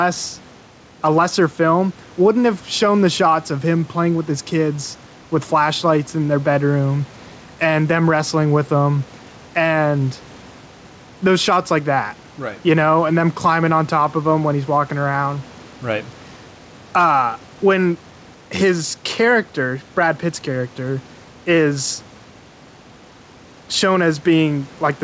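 Throughout the speech, the level pumps: the room noise sits about 30 dB below the talker, and the gain moves by around 5 dB. Loud and quiet passages sound pressed together. This is gain pumping, likely from the microphone gain being set far too high and a fast limiter or compressor clamping down on every loud sound.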